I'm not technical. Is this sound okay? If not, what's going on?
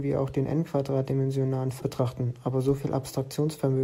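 No. At 1.79 to 1.82 s the speech briefly garbles into a short chirp or hiss and skips slightly ahead. That's likely a broken MP3 bit reservoir: a chunk of the file went missing, and the next piece grabbed leftover data that wasn't its own.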